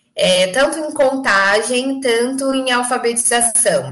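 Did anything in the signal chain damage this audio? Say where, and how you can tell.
Yes. Hard clipping runs through the whole speech clip. Gain about 10 dB too hot drove peaks past the limit of a converter or a fixed-point format conversion, so the waveform tops are cut off flat on a few percent of samples. Those square edges spray harmonics high into the spectrum, giving a harsh, gritty fuzz on every loud syllable rather than the rounder thickening of analogue soft saturation. Quiet passages stay clean, unlike codec smearing, which doesn't track level.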